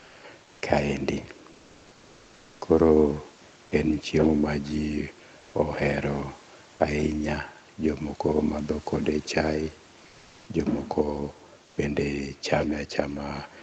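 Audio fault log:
Throughout: echo with no canceller. Every phrase is followed roughly 150 ms later by a faint copy sitting about 24 dB below the direct speech, thinner than the original. It sounds like the far end played the call over a loudspeaker and its microphone picked it up again, with no echo cancellation removing it before it returned over the link. The upper band stops near 8 kHz, consistent with the call codec's bandwidth.
0.00 to 0.19 s, 1.51 to 2.59 s, 10.09 to 10.45 s, 11.65 to 11.77 s: comfort noise in place of the background. In each pause the real background, already about 27 to 34 dB below the loud speech, turns into a smooth, featureless hiss roughly 1 to 2 dB quieter. The longest stretch runs about 1.08 s. This is likely Opus discontinuous transmission, where the sender stops sending audio in silence and the receiver substitutes synthetic noise until speech resumes.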